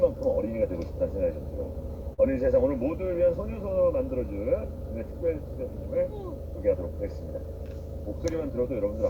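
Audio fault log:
2.13–2.20 s short stall from a late packet: the jitter buffer ran dry, stretching the last sound by 45 ms with nothing lost. The waveform shows a repeated, smeared stretch.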